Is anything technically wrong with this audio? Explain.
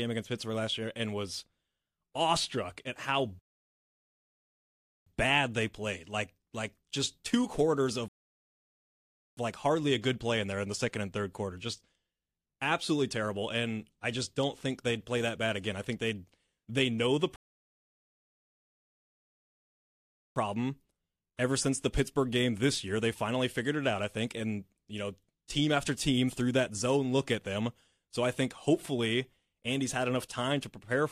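Yes. Three rebuffering stalls break the speech: at 3.39 to 5.06 s (about 1.7 s, after "awestruck at how", resuming on "bad they played"), 8.08 to 9.37 s (1.3 s, after "just two quarters of", resuming on "like hardly a good"), and 17.36 to 20.36 s (3.0 s, after "they'd they know the"). Each time, the player exhausted its downloaded audio and halted until more arrived. The sound drops to silence, then picks up exactly where it stopped. Unlike a dropout, no syllables go missing. Time is simply inserted.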